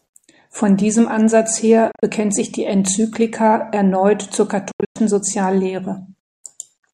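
The speech cuts out in abrupt, stuttering holes twice. From 1.92 to 2.03 s, 80 ms vanish in gaps of up to 27 ms. From 4.71 to 4.96 s, 200 ms go silent, the longest gap 107 ms. Each time the speech resumes as though it had kept playing. This is likely a Bluetooth dropout, with packets reaching the headphones too late and being discarded.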